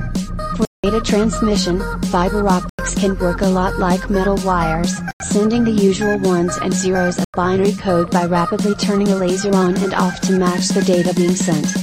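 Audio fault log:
0.65 to 0.84 s, block of digital silence: the sound drops straight to silence for about 186 ms and comes back with no fade, leaving a short hole. The length fits an 8192-sample buffer going out unfilled.
2.69, 5.11 and 7.25 s, block of digital silence: three shorter gaps of about 93 ms each, cutting out and back with no fade, which fits a 4096-sample buffer missing its deadline.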